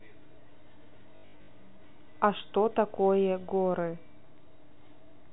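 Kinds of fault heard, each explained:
Packet loss with last packet repeated: between 1.16 and 1.48 s, about 240 ms drops out in bursts of up to 80 ms. Each gap is patched by replaying the previous chunk, giving a robotic 50 Hz buzz that fits 20 ms packets.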